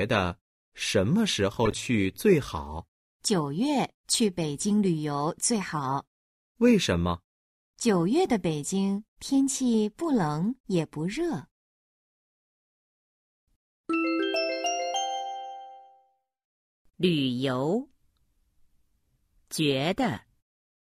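A corrupt frame was decoded at 1.65 to 1.73 s. For about 80 ms, a short glitch of misplaced energy is heard. Damaged bits were decoded anyway, putting energy at wrong frequencies. The length fits roughly three bad frames, peaking around -15 dBFS. The smooth fade-out at the end, near 20.4 s, is a deliberate edit, not a fault.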